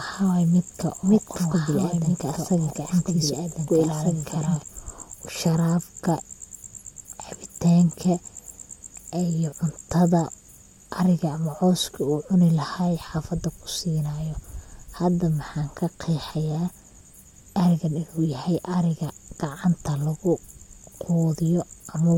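From the very start until 4.62 s the speech is heard as a doubled audio track: a second full-band copy trails the original by about a second and a half, at about 5 dB lower, with no reverberant tail or room colouring. It is likely a second capture path running late. At 4.62 s the copy cuts off abruptly. The spectrogram shows the same harmonic patterns repeated after a fixed offset, and the waveform shows overlapping envelopes ending in a sharp drop.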